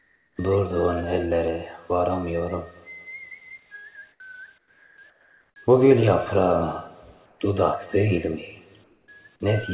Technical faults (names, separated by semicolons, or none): comfort noise in place of the background